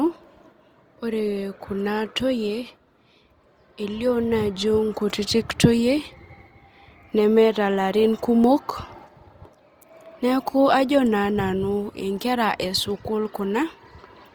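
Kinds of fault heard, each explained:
Opus compression: The speech sounds rough and grainy, with a noisy, sandpapery texture, yet without the swirling holes of MP3; the damage is plainly audible throughout. The bandwidth stays full, extending to about 20.2 kHz. The likely cause is Opus coding in its music mode at a low rate, fitting roughly 24 kbps, where each band keeps its energy but is filled with folded or noise content once the bits run short.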